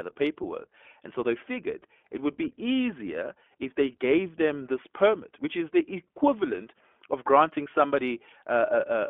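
Throughout the speech, the iLBC codec limits the band to roughly 250 Hz to 3.4 kHz, with plainly audible coding damage: each frame's excitation is coded independently, which fits the 20 ms, 15.2 kbps mode, leaving the voice slightly rough and synthetic.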